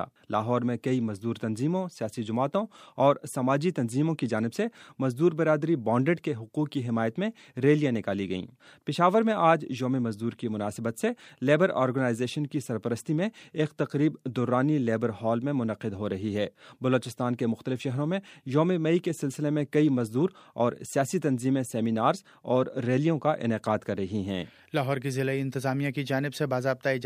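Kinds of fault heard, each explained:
No technical faults can be heard anywhere in the clip: the signal stays continuous and stable, with no gaps, distortion, or level problems.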